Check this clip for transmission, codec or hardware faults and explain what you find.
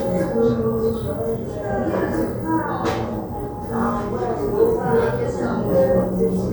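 Nothing faulty can be heard anywhere in this recording.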